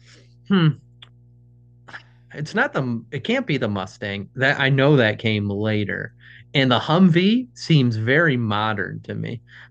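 A steady low drone sits under the speech from start to finish, a fixed tone at 60 Hz with a few low harmonics above it, running at about 30 dB below the speech. This is mains hum: the 60 Hz power line has coupled into the signal path, typically through a ground loop between connected equipment or from a transformer close to the cabling, and it was recorded along with the speech.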